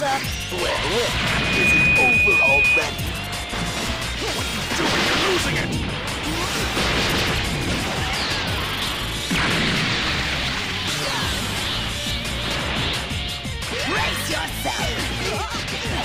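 From 1.14 s to 2.89 s there is a loudspeaker feedback squeal. A single tone at 2.5 kHz appears and swells over about half a second. It then holds as a squeal, sitting roughly 5 dB above the rest of the audio. A microphone was picking up the loudspeaker it fed. At 2.5 kHz the loop gain rose above one, so that frequency kept reinforcing itself. The tone stops at 2.89 s.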